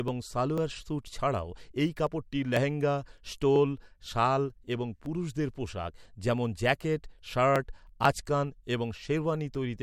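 Speech with periodic USB or driver dropouts: from 0.08 to 9.55 s, roughly a millisecond of audio is skipped every 0.5 s, giving ticks that sound only while there is signal. Their strict even spacing sets them apart from random network packet loss.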